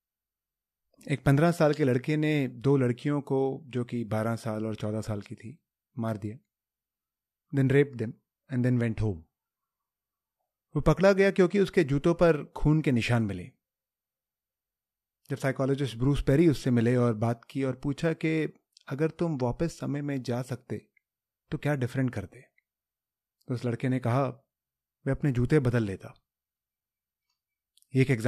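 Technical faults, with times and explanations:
No technical faults are heard in this speech.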